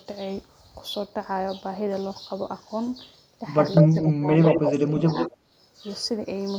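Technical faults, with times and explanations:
3.75–4.05 s, 4.45–4.73 s and 5.18–5.32 s, echo leak: a copy of the speech returns 149 ms late, first about as loud as the original and then fading to well below it. The likely cause is a far-end loudspeaker echo that the echo canceller failed to fully remove and sent back.
3.83–4.28 s and 4.55–5.31 s, speech suppressed in double talk: the speech dips in level while both sides are talking, by about 15 dB in the first stretch and about 10 dB in the second. The likely cause is an echo canceller that could not separate talker from echo and turned both down.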